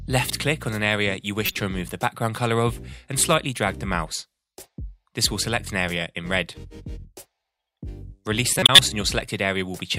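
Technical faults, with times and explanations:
1.46 to 1.56 s and 8.53 to 8.79 s, corrupt frame decoded: flipped bits in compressed frames were decoded anyway, so misread gains and codes spray energy into the wrong frequencies. The result is a loud chirping noise burst, with error peaks around -5 dBFS in the first and around 0 dBFS in the second. The first lasts about 0.1 s, which fits a few damaged frames, and the second about 0.26 s, which fits several. Unlike a concealed loss, the sound is not smoothly patched: it is overwritten by harsh, unrelated energy.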